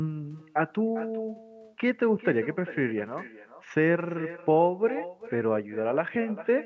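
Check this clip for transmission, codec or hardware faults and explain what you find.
One fault is present for the whole clip; the band stopping at 8 kHz comes from the call's normal microphone processing. Echo with no canceller, throughout: the far end's loudspeaker feeds its own microphone and nothing subtracts that pickup, so the speech returns after a network round trip of roughly 0.4 s. Each phrase is shadowed by a thinner copy about 16 dB quieter.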